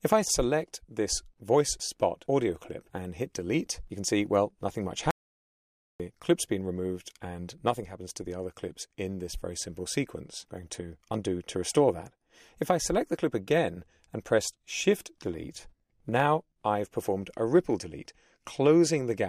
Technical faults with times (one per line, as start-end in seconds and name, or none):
5.11-6.00 audio dropout to silence